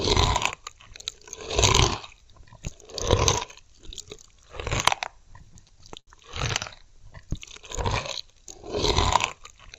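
From 5.53 to 6.10 s the audio shows repeated stalls (stutter). Packets arrived late or slower than playback consumed them, so the jitter buffer emptied four times in that half-second. Each gap was bridged by extending the preceding sound, 112 ms in total with the longest hold at 72 ms, roughly a fifth of the span. Nothing is lost, but the sound hitches and drags unevenly before resuming its normal flow.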